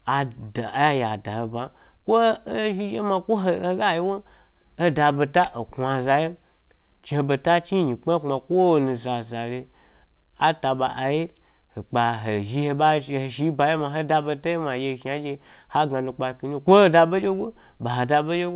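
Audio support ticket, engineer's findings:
Nothing stood out on listening to this speech clip; the call path sounds as expected, with nothing above about 4 kHz, which fits narrowband G.711 A-law at 64 kbps.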